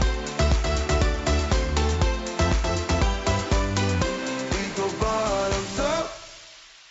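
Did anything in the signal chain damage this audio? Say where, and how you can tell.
No, nothing in the signal chain damaged this audio that I can hear.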